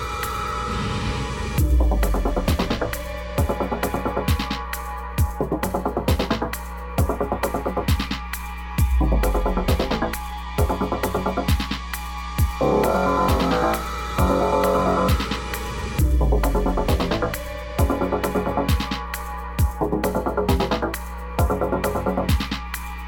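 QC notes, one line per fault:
Throughout: mains hum. A steady low tone at 60 Hz sits under the whole recording, with some low harmonics stacked above it, and it is loud, roughly 10 dB below the signal itself. The power line is leaking into the signal path, through a ground loop between connected equipment or magnetic coupling from a nearby transformer. Because that interference never changes, the tone holds constant regardless of what the audio does.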